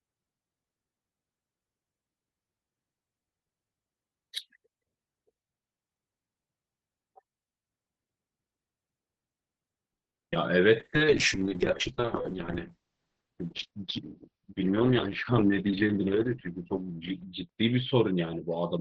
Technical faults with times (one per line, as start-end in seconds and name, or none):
9.93-10.17 call audio freeze
10.23-10.37 short concealed packet loss
10.31-10.34 skip ahead
10.81-18.81 call bitrate drop
10.98-11.58 jitter buffer slow-down
13.82-15.67 jitter buffer speed-up